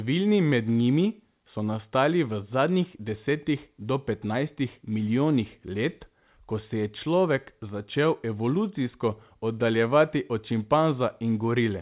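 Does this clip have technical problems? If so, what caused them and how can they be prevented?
No, there are no faults to fix: the speech carries the narrowband character of a telephone-grade call path, with nothing above 4 kHz, which fits G.711 mu-law at 64 kbps.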